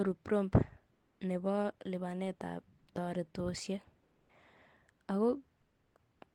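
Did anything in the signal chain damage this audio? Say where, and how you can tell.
Yes, comfort noise in place of the background at the codec: at 0.93–1.19, 2.79–2.87, 4.03–4.29 and 5.61–5.95 s, room tone turns flat and featureless. The sender likely paused transmission under Opus DTX, and the receiver filled the gaps with synthetic noise.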